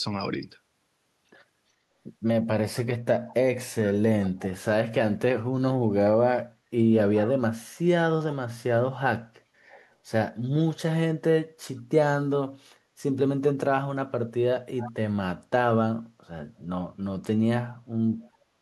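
Echo leak at 4.25–4.47, 7.14–7.31, 9.7–9.84 and 14.78–14.92 s. A delayed copy of the speech, about 15 to 30 dB below it, returns about 0.41 s later. Likely the far end's echo canceller missed its loudspeaker.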